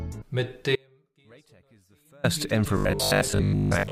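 Two separate problems show up here. At 0.76 s the audio drops out abruptly and stays gone until 2.24 s, about 1.5 s in all. That's an audio dropout to a faint residue: it isn't a pause or a fade, and the gap still holds a faint leak of the sound, something like 35 dB below normal. So the path downstream stayed live while the real feed was cut, likely a brief loss of the source or its connection. Then from 2.77 s to the end the audio turns into a rigid, metallic buzz at 50 Hz that still roughly tracks the material underneath. That's robotic sound from repeated short buffers: a 50 Hz pitch fits a chunk about 20 ms long being played over and over because fresh audio wasn't arriving in time. Most of that stretch is repeats rather than real audio, likely a starved playback or processing buffer.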